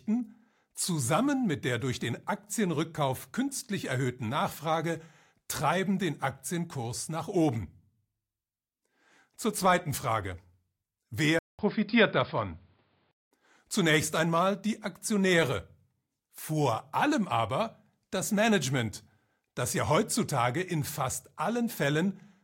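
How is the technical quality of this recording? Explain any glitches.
One glitch stands out. From 11.39 to 13.31 s the speech turns dull and boxy, with nothing above 5.1 kHz, a 200 ms gap, faint new background noise and unchanged loudness. This is likely an input switched to a poorer device.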